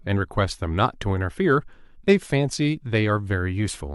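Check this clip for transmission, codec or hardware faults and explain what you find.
No faults can be heard anywhere in this recording.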